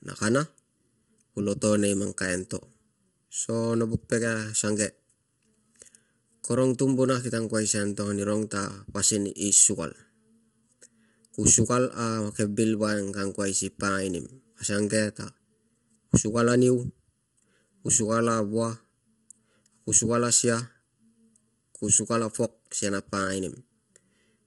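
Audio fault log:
throughout: channel delay (comb filtering). One channel arrives a fraction of a millisecond late, so the mono sum cancels at evenly spaced frequencies starting near 700 Hz. Unlike plain dullness from a filter, the hollow, phasey colour comes from fixed notches repeating up the spectrum.
throughout: low-delay AAC compression. The speech sounds rough and grainy, with noise filling the gaps between harmonics and a thin, synthetic top band ending at 11.6 kHz. This is likely AAC-ELD at around 32 kbps. Its short frames blur pitch detail, giving grain rather than fixed notches.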